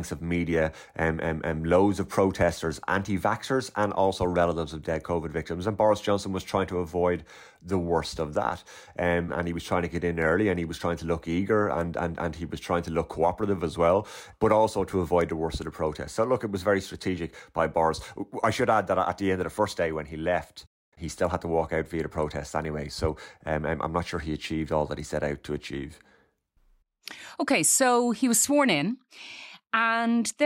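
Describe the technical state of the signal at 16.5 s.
At 16.5 s the speech signal is intact, with no audible fault at that point.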